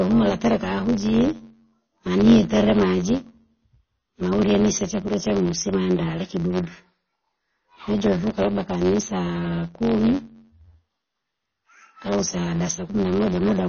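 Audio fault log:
throughout, block size mismatch (truncated): A steady buzz at 91.9 Hz runs under the speech, and everything plays back 1.07 times too fast. The end of each written block, which fits 512-sample blocks, is dropped before the next stage reads it, so the waveform jumps at every boundary, about 10.9 ms apart, and the missing pieces shorten the timeline. On a spectrogram this shows as evenly spaced vertical seams, with a comb of harmonics at multiples of 91.9 Hz.
throughout, MP3 compression: Plainly audible codec damage gives the speech a watery, swirly quality with smeared onsets. This is likely from MP3 encoding at a low bitrate, which fits around 24 kbps. The encoder ran short of bits and zeroed weak frequency lines, which flicker on and off from frame to frame. On a spectrogram the energy stops at a flat ceiling at 6.5 kHz, and below it there are patchy holes that shift from frame to frame.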